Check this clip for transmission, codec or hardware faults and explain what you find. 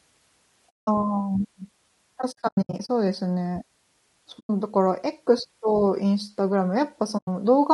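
There are two faults here: compression damage throughout, plus four muted dropouts.

Low-delay AAC compression throughout: the speech sounds rough and grainy, with noise between harmonics, likely AAC-ELD's short frames starving at around 32 kbps.

AAC frame loss with muting at 0.70–0.88 s, 2.21–2.89 s, 4.39–4.50 s and 7.17–7.28 s: lost frames are zeroed, so the speech fades into soft holes. The 2.21 s stretch is scattered gaps totalling 360 ms, the longest about a tenth of a second.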